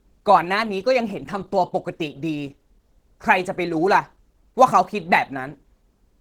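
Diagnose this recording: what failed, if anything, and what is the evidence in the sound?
The failure is in the codec stage, throughout the clip. The speech sounds hoarse and grainy, with plainly audible damage, yet content still reaches the full band. This is likely Opus compression in hybrid mode. The sound fits a bitrate near 16 kbps.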